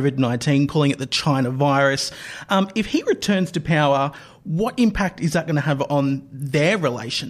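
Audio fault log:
No fault is heard in this speech clip.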